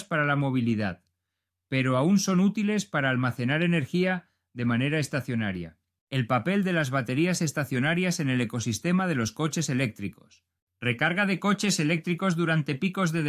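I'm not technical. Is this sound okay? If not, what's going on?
Yes, this sound is okay. Nothing in it is going wrong, so there's nothing to explain.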